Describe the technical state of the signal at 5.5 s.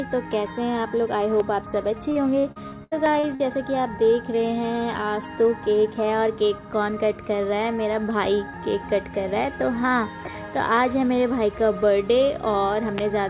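At 5.5 s the audio is intact, with only the narrow band of the working call path, which carries nothing above 4 kHz.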